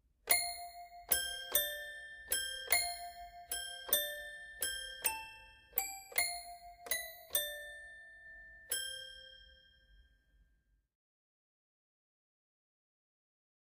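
No technical faults are audible.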